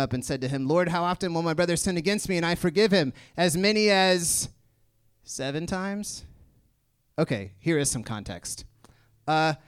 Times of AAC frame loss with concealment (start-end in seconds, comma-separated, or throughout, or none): none